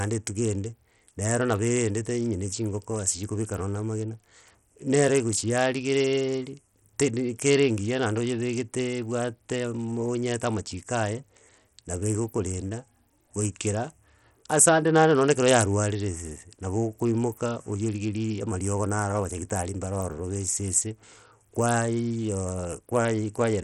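Throughout, the treble flickers and thins, with gritty noise and aliasing riding on the speech, nothing above 17 kHz; likely Bluetooth SBC compression, its heavy damage fitting about 64 kbps.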